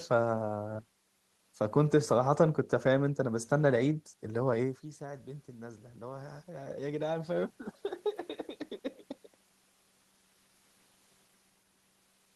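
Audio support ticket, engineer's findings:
Automatic gain rising, 4.23 to 8.13 s. Voice and room noise swell together. Talker backs off near 4.5 s, input drops about 16 dB, then AGC slowly adds about 6 dB, pulling the background up too.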